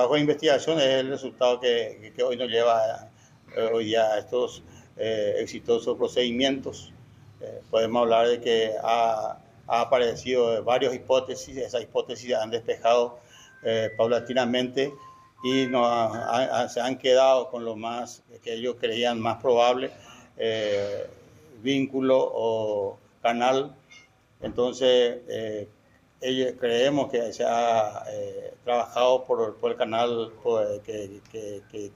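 Timecode bleed runs throughout: a faint chirping warble near 1 and 2 kHz, well below the sound, that fits 30-frame code and flips between two pitches, unlike a steady test tone.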